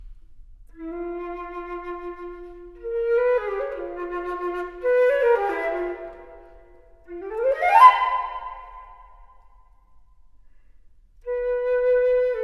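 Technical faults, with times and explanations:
No technical faults can be heard anywhere in the audio. Nothing in the sound points to a problem with how it was captured, processed or delivered.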